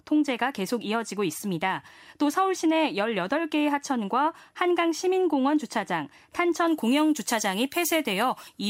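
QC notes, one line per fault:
6.67–8.70 s, pre-emphasis left on. The treble boost used for transmission stays in place because the matching de-emphasis cut never comes. It follows the FM 75 µs curve. Highs sit about 13 dB above 1 kHz at 10 kHz. The speech turns thin, bright and sibilant.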